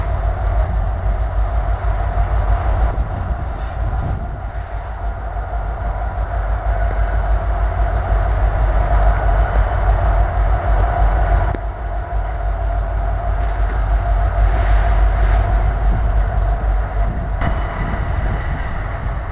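Nothing stood out as a fault on listening; the audio arrives over a call path with nothing audible above about 4 kHz, which fits G.711 mu-law telephone coding.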